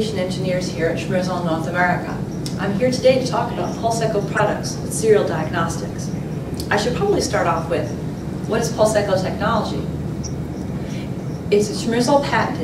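Four short glitches cut into the audio. They fall at 4.36 to 4.40 s, 5.88 to 5.96 s, 10.24 to 10.27 s and 11.25 to 11.31 s. Each is a corrupt frame decoded. Damaged bits in a compressed frame were played anyway, putting energy at wrong frequencies. Each burst lasts about 36 to 72 ms, which points to a few frames per event. The first is the loudest, near full scale. The others sit lower, around -20 to -30 dBFS.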